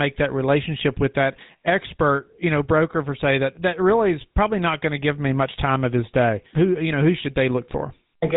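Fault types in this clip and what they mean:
GSM full-rate codec: vocal-tract model driven by sparse regular pulses, giving buzzy, gravelly speech; the spectrogram shows a sharp ceiling near 3.8 kHz, consistent with 13 kbps.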